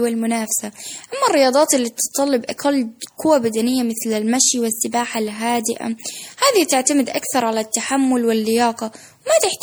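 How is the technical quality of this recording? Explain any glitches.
The technical quality is degraded by generation loss across the whole speech recording. The sound is swirly, hollow and smeared, with blurred consonant attacks. That points to repeated MP3 re-encoding, likely about four passes at something like 64 kbit/s, each re-quantising on a shifted frame grid so noise and spectral holes accumulate.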